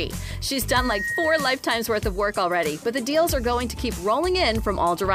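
A single piercing tone at about 1.9 kHz rises out of the sound from 0.68 s, swelling over a little under half a second into a squeal that ends up roughly as loud as the audio itself before it stops at 1.65 s. This is loudspeaker feedback squeal: a microphone was picking up a loudspeaker it was feeding, and around 1.9 kHz the loop's gain went above one, so that frequency kept reinforcing itself.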